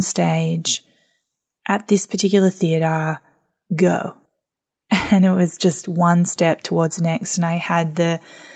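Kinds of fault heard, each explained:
No faults can be heard in this speech recording.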